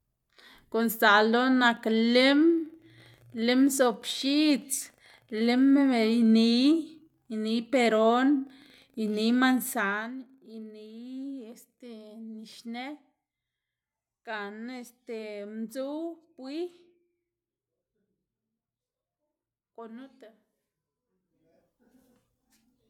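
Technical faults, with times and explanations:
No technical faults can be heard in the speech. Where the level moves, it rises and falls smoothly, as a fader would move it.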